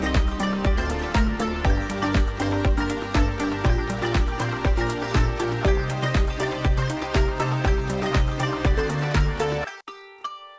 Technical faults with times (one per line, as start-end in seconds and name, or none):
none